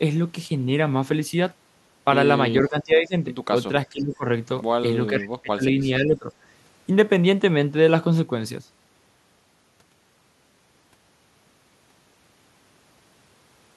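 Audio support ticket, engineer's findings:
Speech suppressed in double talk at 2.68–3.14 s and 3.86–4.25 s. Level ducks about 20 dB. At 5.1–6.27 s it is deeper, about 25 dB. Likely the echo canceller attenuating near-end speech it can't separate from loudspeaker echo.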